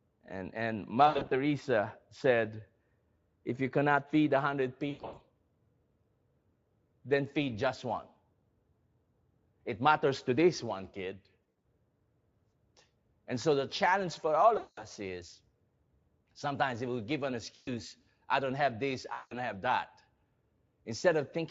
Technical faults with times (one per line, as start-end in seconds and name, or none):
1.07-1.36 VoIP packet loss concealed by the speech codec
4.89-5.21 VoIP packet loss concealed by the speech codec
11.54 VoIP packet loss concealed by the speech codec
14.57-14.84 VoIP packet loss concealed by the speech codec
17.55-17.80 VoIP packet loss concealed by the speech codec
19.13-19.34 VoIP packet loss concealed by the speech codec